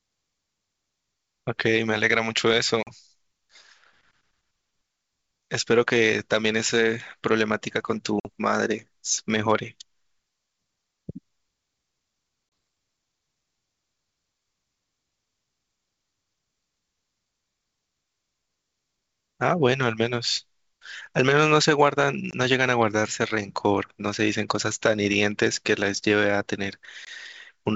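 Packet loss on an ADPCM call cuts hard-edged silent holes at 2.83, 8.2, 12.49, 22.31 and 27.05 s. Each gap drops a few packets, lasting 40, 50, 30, 20 and 20 ms. The decoder's predictor then drifts from the sender's. Speech returns with brief distortion.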